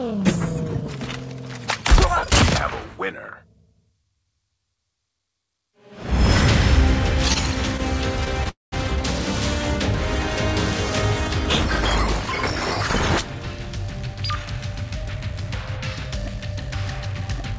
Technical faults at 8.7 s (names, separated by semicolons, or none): call audio freeze